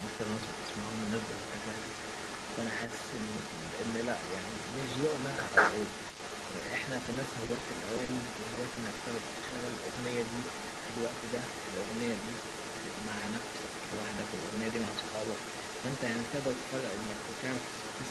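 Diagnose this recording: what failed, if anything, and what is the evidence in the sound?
Echo leak runs through the whole recording, from 0 s to the end, at the call-processing stage. A delayed copy of the speech trails the original by about 0.19 s. It is fairly strong, only a few decibels below the direct sound, so it reads as a distinct second image rather than faint reverb. The likely cause is a far end on loudspeaker whose echo canceller let part of the microphone pickup through and sent it back.

Repeated packet loss (robotic sound) occurs from 6.07 s to 9.01 s and is a network fault. Across this stretch, well over a dozen short holes, none longer than about 40 ms, break up the speech. Roughly an eighth of the span is synthetic fill. The decoder extends the last waveform into each gap, and because the next gap arrives before the signal settles, the result is choppy, with pieces of sound missing.

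Short concealed packet loss occurs twice, at 9.49 s and at 9.95 s, and is also network-stage. Each event spans about 40 ms, and roughly half of it is concealed audio standing in for data that arrived too late. The receiver continued the preceding sound, pitched or noise-like, then cross-faded back, which leaves a brief smear or wobble. These are isolated single drops just after the heavier loss burst has ended.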